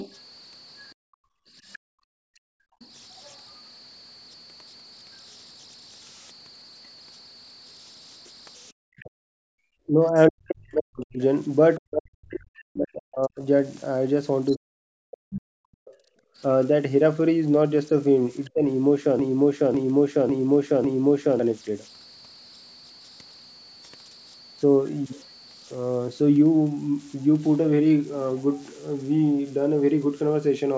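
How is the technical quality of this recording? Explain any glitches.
The recording has several clear technical faults: a constant whistle from the converter, plus echo-canceller trouble in two stretches. Another voice leaks through, the room sound drops out, and the main talker is pushed down while both sides speak.

Converter idle tones run through all the speech. A thin whistle sits around 5 kHz, with grainy residue about 27 dB below the signal, most audible in pauses. An undithered delta-sigma converter fed a small input settles into repeating bit patterns, and those patterns produce tones. On a spectrogram this shows as a steady horizontal line near 5 kHz across the whole clip, inside the call band that stops at 8 kHz. The waveform looks nearly unchanged.

Other side's voice leaking through occurs from 0.0 to 3.37 s, from 9.0 to 14.54 s, and briefly from 18.44 to 18.5 s. A second voice can be heard well beneath the talker, around 20 to 30 dB down. 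This is likely loudspeaker playback that the echo canceller failed to remove from the microphone. A spectrogram shows faint, separate harmonic striations under the main talker. The waveform gains only a low-level fuzz in gaps.

Background gated by the echo canceller happens from 0.95 to 2.8 s, where the room tone falls away by up to about 40 dB for roughly a second and a half in total. It happens again from 16.24 to 16.37 s, a shorter dip of about 25 dB. The canceller clamped the microphone while the loudspeaker was active, then released it. A spectrogram shows the noise floor going blank in vertical bands. The waveform shows near-flat gaps where background hiss should be.

Speech suppressed in double talk spans 8.92 to 18.63 s. The talker's level drops in pieces, by up to about 40 dB, for around five seconds in total. The likely cause is that both sides were talking at once, so the canceller could not tell the talker from the echo and attenuated everything. 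The waveform shows chopped envelopes with sudden holes. A spectrogram shows speech energy blinking out in patches.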